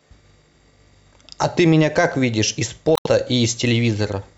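At about 2.94 to 3.07 s there's damaged data in the compressed stream: the decoder loses sync, glitches briefly and skips ahead to the next clean frame.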